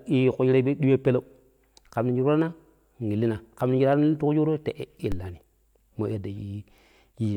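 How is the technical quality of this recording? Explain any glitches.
The recording has two glitches near the end.

At 5.12 s there is a DC step. The waveform's zero line suddenly jumps to a new offset, and the offset then drains away through a high-pass stage at about 5 Hz. The jump is heard as a single low thump while the speech carries on unchanged.

At 6.40 s a corrupt frame was decoded. Flipped bits in roughly two compressed frames were played as if valid, so energy lands at the wrong frequencies. The result is a brief, fairly quiet chirp or blip laid over the speech.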